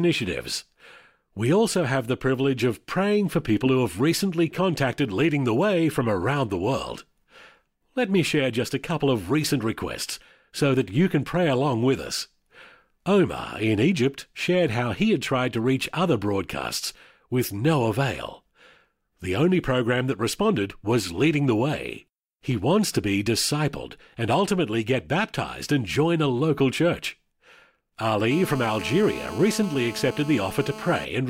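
GSM phone buzz runs from 28.31 to 31.05 s: a nearby 2G phone on a call transmits in bursts about 217 times a second, and the audio circuit rectifies them into a steady, harsh, harmonic-rich rasp at 217 Hz, about 14 dB below the speech.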